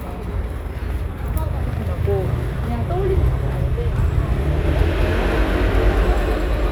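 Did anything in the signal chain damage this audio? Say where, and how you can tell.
Yes. From 4.66 s to the end, everything is heard twice: a second full-band copy trails the first by roughly a fifth of a second, at about the same level, so each event has a hard, flat double. The copy has no decay or room colour and cuts in abruptly at 4.66 s. This is a doubled audio track, likely from the same signal being captured again through a slower driver or buffer path and mixed back in, offset by a fixed delay.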